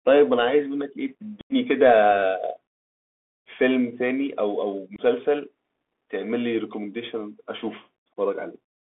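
The speech runs throughout over a Bluetooth CVSD headset codec, a one-bit delta link that fits 64 kbps. The band is held to roughly 250 Hz to 3.6 kHz, and the codec damage is plainly audible: scratchy sibilants, strained loud peaks, and a granular hiss underneath. Unconcealed Bluetooth headset packet loss follows at 1.41 to 1.53 s, where about ten packets, some 90 ms of audio, vanish and nothing fills them. It leaves an abrupt hole. A shorter dropout at 4.96 to 4.99 s loses about three packets, 22.5 ms, as a brief chop.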